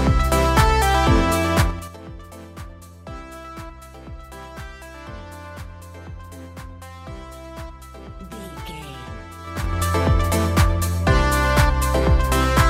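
At 1.62 s the level drops by roughly 20 dB in about 5 dB jumps, and you get zipper noise: each unsmoothed step leaves a little click, so it ticks along until 1.96 s. The same thing happens on the way back up, in about 4 dB steps, from 9.39 to 9.81 s.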